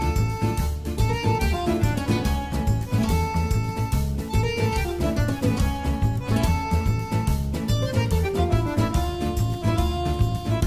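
No technical faults occur anywhere in the clip, so there is nothing to describe in time order.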